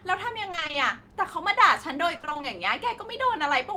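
Speech with repeated packet loss (robotic sound) at 0.51–0.75 s and 2.17–2.45 s: short back-to-back dropouts of about 20 ms each were patched by extending prior audio, leaving half of each stretch choppy and mechanical.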